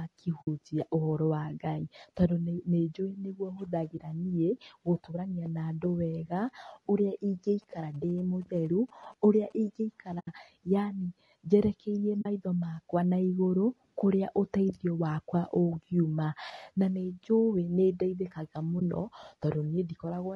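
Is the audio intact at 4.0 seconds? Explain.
No. From 3.97 to 4.00 s there is AAC frame loss with muting. A frame's spectrum was zeroed, so the sound fades into a brief dip. The gap fits one lost frame of about 20 ms. Throughout, the sound is rough and grainy, with noise between harmonics. This is likely low-delay AAC compression at a low bitrate, roughly 32 kbps.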